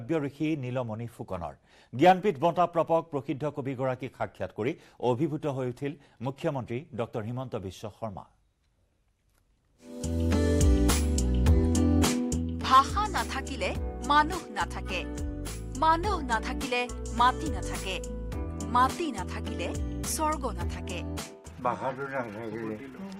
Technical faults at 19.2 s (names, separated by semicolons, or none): none